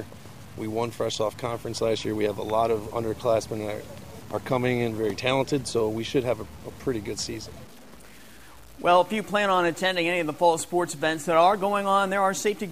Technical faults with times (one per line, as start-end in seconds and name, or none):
0.00-12.72 low bit depth without dither